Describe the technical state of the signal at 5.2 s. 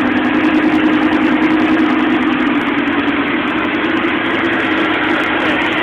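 Dropped samples at 5.24 s: a single sharp click, a thin vertical line across the spectrum. The likely cause is a fraction of a millisecond of samples missing, so the waveform jumps abruptly to a later value, far too brief to remove any audible sound.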